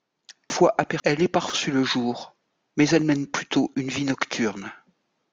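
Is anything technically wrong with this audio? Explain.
Yes. Between 0.5 and 1.5 s the clip has chunks out of order. A 500 ms block of audio reached the output one chunk late, so the block that belonged at 0.5 s plays at 1.0 s, after the chunk that should have followed it. Nothing is missing, but the speech in that second is jumbled. There are three hard joins, at 0.5, 1.0 and 1.5 s, just before "le jour mais elle".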